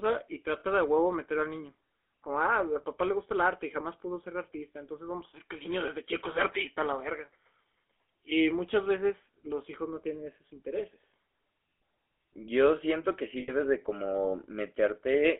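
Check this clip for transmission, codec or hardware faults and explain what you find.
The speech has two faults: GSM full-rate coding for the whole clip and two short bursts of lost GSM frames.

GSM full-rate codec, throughout: the speech is confined to roughly 300 Hz to 3.4 kHz and carries a plainly audible buzzy, gravelly roughness. The codec rebuilds the voice from a vocal-tract model fed with sparse regular pulses, which fits 13 kbps GSM full rate.

Lost GSM frames, 0.6 to 0.64 s, just before "de a huevo meter": about 40 ms of audio, consistent with two frames, is replaced by the decoder repeating the last good frame's settings. This gives a brief rough, metallic ring in place of the missing sound.

Lost GSM frames, 13.4 to 13.52 s, just after "siento que sí": about 80 ms is lost, consistent with four frames. The same repeat concealment holds the sound longer here, so the metallic ring lasts longer.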